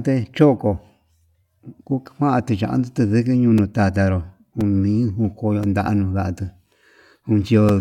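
Regular ticks cut into the speech every 1.02 s from 3.58 s to 7.69 s, about five in all, each a few milliseconds of sound blanked to silence. These are periodic USB or driver dropouts: some background task stalls the audio path on a fixed cycle.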